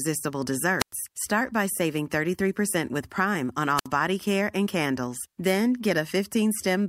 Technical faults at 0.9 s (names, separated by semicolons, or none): wireless microphone squelch dropout